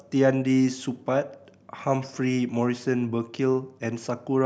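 No technical faults can be heard anywhere in this speech recording. There is nothing in it that needs a timestamp or a closer look.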